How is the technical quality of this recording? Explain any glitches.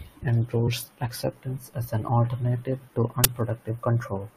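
Two glitches interrupt the speech.

At 0.66 s, just before "acceptance as an alternative", the speech lurches forward. This is compressed frames skipped. Roughly two frames of about 23 ms each never reached the output, either missing from the file or rejected by the decoder as corrupt, so about 50 ms of speech vanishes.

At 3.24 s, right after "as an alternative to", a brief, loud crack cuts in, lasting about 12 ms, which fits a 512-sample buffer. This is an uninitialised buffer. The block went out to playback before any audio had been written into it, so whatever stale data sat in that memory was played as if it were sound.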